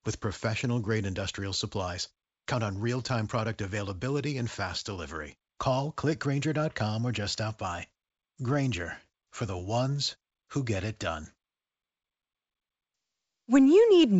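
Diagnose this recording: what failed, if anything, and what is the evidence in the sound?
Nothing failed in this recording.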